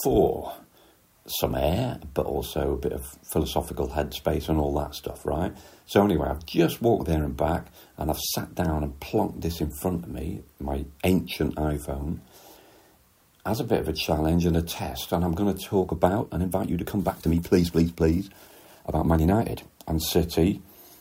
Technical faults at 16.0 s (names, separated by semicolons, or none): time-stretched section